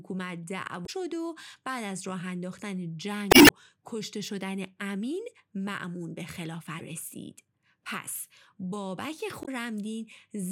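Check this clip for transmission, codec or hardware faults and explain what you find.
There is one recurring codec fault in this speech. Damaged data in a compressed stream occurs at 0.83–0.89 s, 3.30–3.51 s, 6.76–6.81 s and 9.42–9.49 s. Corrupted bytes make the decoder misread frames and lose sync until it finds the next valid frame header. Each corrupted frame is heard as a short glitch, with the longest at 3.30 s.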